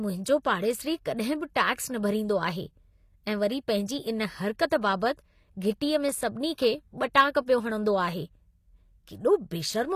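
Speech throughout, likely passed through HE-AAC compression at a low bitrate near 24 kbps, so rebuilt treble turns sibilants gritty and metallic, with nothing above 14.9 kHz.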